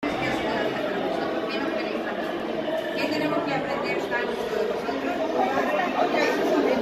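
At 2.40 s there is a block of digital silence about 2.9 ms long, which fits a 128-sample buffer left unfilled when the output deadline passed. The audio drops straight to zero and returns with no fade, so the two hard edges merge into a single short tick rather than an audible gap. Unlike a softer dropout or a fade-out, there is no taper.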